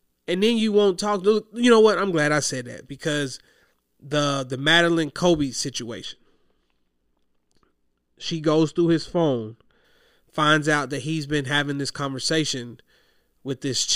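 From 6.05 to 9.85 s, de-emphasis is applied wrongly. A treble cut slopes down, about 13 dB at 10 kHz. The speech turns dull and muffled.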